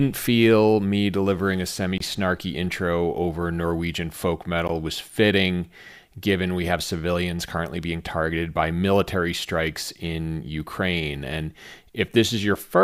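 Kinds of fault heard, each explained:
Gap at a join of encoded pieces: the speech was encoded as separate pieces and spliced without trimming, so each piece's leading encoder delay and padded final frame remain as dead air. Continuous speech drops out abruptly, edges smeared by the codec, then resumes exactly where it stopped. There is a 23 ms gap from 1.98 to 2.00 s, between "me delivering a semi" and "snarky intro over", and a 17 ms gap at 4.68 s, just before "was fitting given we".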